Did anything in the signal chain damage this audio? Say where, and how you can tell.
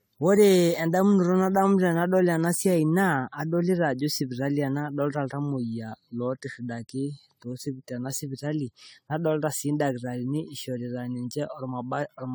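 Yes. At the codec stage, the speech shows generation loss throughout. It sounds swirly, smeared and hollow beyond what a 96 kbit/s AAC-LC encode would give, and attacks blur. That is likely from about seven decode-re-encode passes, each stacking new quantisation noise and spectral holes.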